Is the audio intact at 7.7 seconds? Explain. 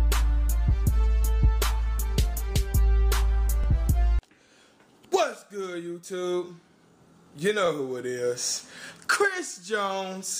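No. From 7.66 to 7.68 s there is a brief click-like stutter where about 23 ms of sound plays twice. This is overlapping chunks: the audio was handled in 4.0 s chunks, and this chunk began before the previous one ended, duplicating that sliver at the join.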